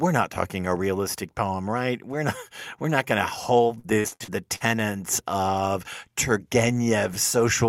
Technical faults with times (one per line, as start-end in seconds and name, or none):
3.79-4.66 repeated packet loss (robotic sound)